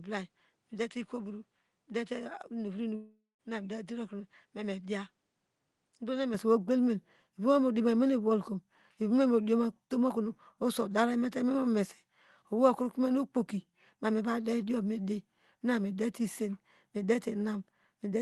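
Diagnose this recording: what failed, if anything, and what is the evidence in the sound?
From the start to 6.34 s the speech sounds duller and about 5 dB quieter, with nothing above 10.5 kHz and a faint new noise floor, then opens up with no gap. That's likely an input switched to a poorer device at the driver or device stage.

At 2.95 s the speech smears into a fading buzz, goes silent for about 0.19 s, and picks up again at 3.41 s with roughly 0.44 s of audio simply missing. That points to a long network dropout on the Opus call path, likely.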